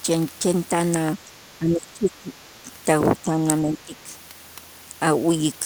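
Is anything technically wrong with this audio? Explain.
Yes. The speech is suppressed in double talk twice: from 1.25 to 2.7 s, where it drops in and out for about a second in total and falls by about 20 dB at its lowest, and again from 3.63 to 4.13 s, with a shallower dip of about 15 dB. The likely cause is an echo canceller that couldn't separate this talker from the far side's echo while both were talking, so it pulled everything down together.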